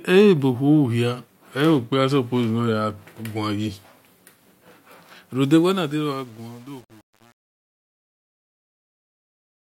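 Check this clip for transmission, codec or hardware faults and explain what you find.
One fault shows up, on the closing fade-out of this speech recording: truncation distortion on a fade, from 5.44 s to the end at 9.62 s. As the level sinks, the sound turns grainy and rough, and from 5.72 s onward the grit is at its worst. The cause is a fade stage that discards low-order bits without dither, consistent with roughly 8-bit resolution. Near the smallest step, the waveform collapses into coarse square steps.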